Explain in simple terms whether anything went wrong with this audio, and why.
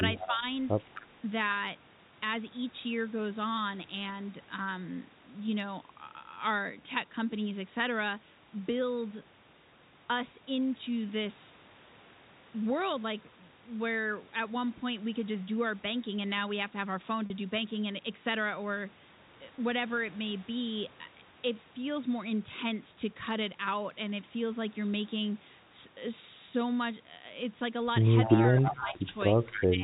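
A few things went wrong. There's echo leak: a copy of the voice trailing about a quarter second behind, at 0.18 to 0.27, 0.8 to 1.02 and 28.25 to 29.67 s. It's likely from a speakerphone whose echo canceller missed some sound.

The speech also dips during speech suppressed in double talk, at 0.2 to 0.43, 28.25 to 29.01 and 29.32 s to the end. That likely happened because the canceller turned everything down while both sides overlapped.

Finally, there's packet loss with pitch repetition at 17.26 to 17.30 s and 19.56 to 19.58 s. Brief gaps of 40 and 20 ms were filled by repeating the last bit of sound, which gives a tiny held buzz.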